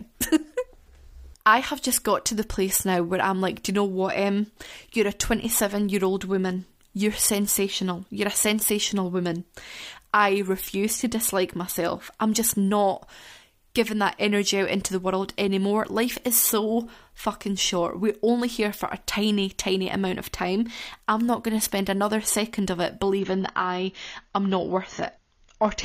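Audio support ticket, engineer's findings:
Adaptive stream at a lower bitrate, 23.19 s to 25.84 s (end). Abrupt drop, no gap: treble gone above 6.9 kHz, swirly codec artefacts on speech. Spectrogram shows a hard ceiling at 6.9 kHz. Player switched to a lower rung, which fits roughly 24 kbit/s AAC.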